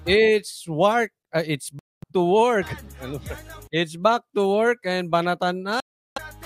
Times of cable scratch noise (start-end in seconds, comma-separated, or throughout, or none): none